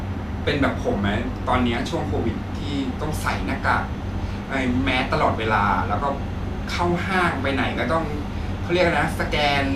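Speech recording, no technical faults detected.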